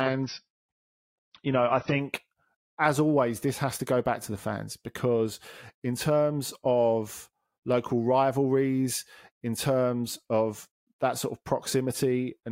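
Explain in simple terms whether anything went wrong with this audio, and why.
For the first 2 seconds the speech sounds dull and smeared, then it abruptly becomes clearer with no break in the sound. This is an adaptive stream starting at a low bitrate: the player began on a cheap, small version of the stream so playback could start quickly, then switched to a better version once it had judged the connection speed. During that opening stretch nothing above about 6 kHz gets through, so crisp sounds like s and t lose their edge.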